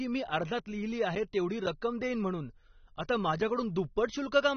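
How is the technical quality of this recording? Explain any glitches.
The recording is clearly degraded. Throughout, the speech sounds dull and smeared, with nothing above about 6.3 kHz and a fizzy, warbling texture on sustained sounds. This is likely AAC compression: AAC-LC at a low bitrate, consistent with roughly 24 kbps, cuts the top band and coarsely quantises the remainder.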